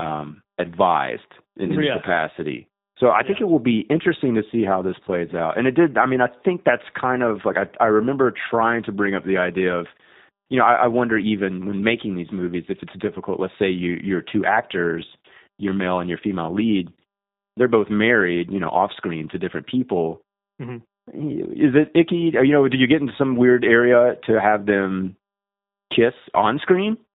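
G.729 codec damage runs through the whole of this speech clip, at a quality that fits the 8 kbit/s G.729A variant. Each 10 ms frame is rebuilt from a vocal tract filter, pitch predictor and sparse pulses, so nothing above 4 kHz survives and the speech sounds plainly rough and synthetic.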